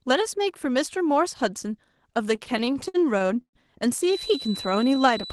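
From 2.35 to 3.56 s the speech drags and stutters through about a dozen short stalls, the longest about 121 ms, with held sound filling roughly 28% of that stretch. These are repeated stalls (stutter): packets arrived late, the jitter buffer kept emptying, and the receiver stretched the last sound until data resumed.

At 3.97 s a thin, steady whistle near 4 kHz appears and runs to the end, swelling and fading slowly about 15 dB below the speech. It is likely a feedback whistle, with a loudspeaker-to-microphone loop ringing at one frequency without running away.

From 4.69 to 5.12 s the speech slows to about 91% speed at unchanged pitch, gaining 45 ms and sounding drawn out. This is a jitter buffer slow-down, where the receiver repeated single pitch periods to rebuild its reserve after running low or raising its target delay.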